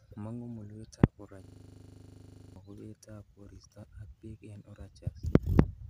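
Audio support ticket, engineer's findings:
System hang loop, 1.44–2.56 s: identical 40 ms segment cycling at 25 Hz, a buzzy stutter. Stalled driver, ring buffer replayed. Exact repeats, not silence as in a dropout. About 1 s lost.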